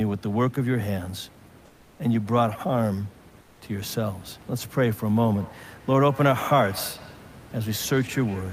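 At 1.65 to 1.99 s and again at 3.41 to 3.61 s, the room's background, which sits about 26 dB below the speech, is replaced by comfort noise. For 340 ms and then 200 ms the textured hiss gives way to a smooth, featureless noise, about 4 dB and then about 5 dB quieter. The cause is likely Opus discontinuous transmission, with the receiver synthesising filler while the sender pauses. Unlike a dropout or a noise gate, the gap never goes silent. The change is in texture and level, not a cut to nothing.

From 5.3 s to the end there is feedback echo between two devices. The speech returns at a steady interval of about a fifth of a second, at its loudest about 18 dB below the direct sound, with a thin, ringing quality. A second device in the room is replaying the call into the microphone, and neither echo canceller removes it. Room reverberation would smear smoothly into a tail. Here the repeats are distinct and evenly spaced.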